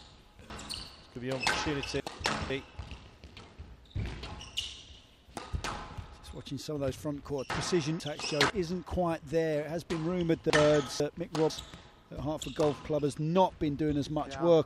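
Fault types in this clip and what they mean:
Chunks out of order: the audio jumbles at 0.5 to 2.5 s, 7.5 to 8.5 s and 10.5 to 11.5 s, because a 500 ms chunk plays late, three chunks late first, then one chunk late twice, leaving hard joins.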